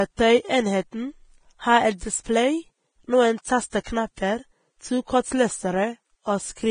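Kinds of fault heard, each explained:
Vorbis compression: The speech sounds hissy and grainy throughout, with roughened tones, smeared consonant onsets, and nothing above about 9.7 kHz. The likely cause is heavy Vorbis coding at a low bitrate, around 22 kbps, which turns fine treble detail into noise.
Pre-echo: At 3.84 s a hiss of about 18 ms comes just before a sharp onset, softening its attack. The codec's quantisation noise, sized for the loud part of a transform block, has spread back into the quiet moment before it.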